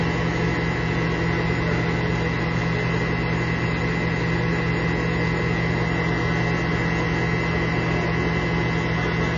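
MP3 compression runs through the whole clip and is most likely the cause of what is heard: the audio stops dead at about 7 kHz, leaving it dull and closed-in, and the coding damage is plainly audible, with a watery, swirling texture. That fits a very low bitrate of around 24 kbps. With so few bits, the encoder cuts off the treble at a fixed point and drops weaker frequency components, which then flicker in and out from frame to frame.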